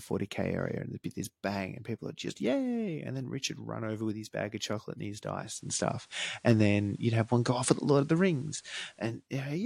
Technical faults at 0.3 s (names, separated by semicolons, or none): none